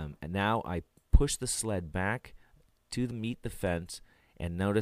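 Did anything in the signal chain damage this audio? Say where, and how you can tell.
No, nothing in the chain from capture through to playback has left an audible mark on this signal.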